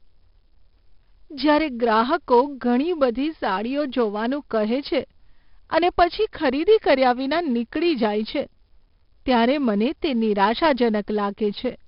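Speech runs through 4-bit ADPCM compression for the whole clip, with heavy damage. Each sample is coded as a coarse step from a prediction, so a gritty hiss rides on every loud syllable and fades in pauses. Sharp consonant onsets crunch where the step size lags. Nothing is heard above 5.3 kHz, which fits a low sample rate near 11 kHz at roughly 44 kbps. Unlike fixed low-bit-depth quantisation, the noise follows the signal level, and it has none of the swirling of perceptual codecs.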